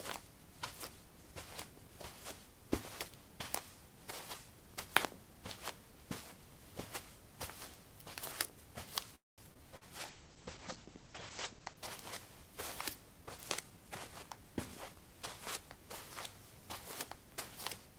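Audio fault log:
9.15–9.41 s, call audio freeze: the sound stalls, the last moment trails briefly into a fading tail, then about 200 ms of silence follows before it resumes where it stopped. Likely the packets were held up and the jitter buffer ran dry. Unlike packet loss, nothing is lost; a 224 ms gap is inserted and everything after it arrives later.
9.54–9.64 s and 9.77–9.84 s, short concealed packet loss: two brief smears appear just after the freeze. Each time, 40 ms of sound never arrived, and the receiver patched the hole by extending what came before. The patch is 12 ms in the first case and 41 ms in the second. Unlike a freeze, real audio is missing, and a short transient can drop out entirely.
10.07–11.87 s, call bitrate drop: the bitrate falls from 32 to 11 kbps and stays at the low point for 1.72 s. The top of the spectrum shrinks from 20 kHz to 8 kHz, so the sound turns muffled. 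Unlike concealment, this is a sustained coarsening rather than a momentary blemish.
13.21–15.02 s, jitter buffer speed-up: the sound runs at 112% speed but keeps its original pitch. The receiver trimmed many tiny pitch-period slices, about a fifth of a second in total, to shed excess buffered delay. Resampling would raise the pitch; here only the timing is compressed, which gives a hurried feel.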